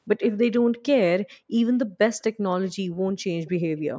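A speech recording carries two brief traces of echo leak. From 0.21 to 0.37 s, a faint delayed copy of the speech trails about 300 ms behind, roughly 20 dB below it. A shorter scrap appears from 3.46 to 3.50 s, quieter still at around 25 dB down. The likely cause is a far-end loudspeaker whose echo canceller let part of the signal return. The call's microphone processing stays within 8 kHz.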